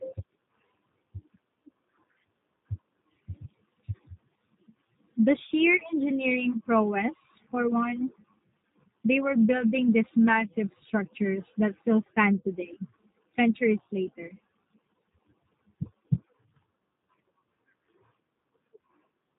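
From start to finish the speech carries G.729 codec damage: rough, slightly synthetic pulse-rebuilt voicing with nothing above 3.8 kHz, which fits an 8 kbit/s G.729A encode.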